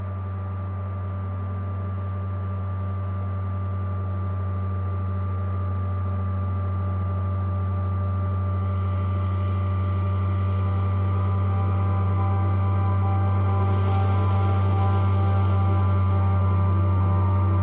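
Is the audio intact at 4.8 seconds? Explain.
No. At 4.8 s the audio sits inside a run of repeated timing corrections lasting from 0.03 to 7.71 s. The receiver keeps repeating short pieces to stay in step with a sender whose clock runs slow, playing at 97% speed and adding roughly 200 ms in total. The result is small hiccups and a slightly dragging, unsteady tempo. On a waveform, brief duplicated segments appear at uneven spacing. On a spectrogram, they show as short repeated slices with slight discontinuities at their edges.

The underlying fault is clock drift between sender and receiver, present throughout. The sender's clock runs about 3% slower than the receiver's, so the jitter buffer keeps draining and must be padded by those repeats. On a spectrogram this appears as occasional vertical seams where content stutters, all below the G.711 ceiling of 4 kHz, above which the display stays empty.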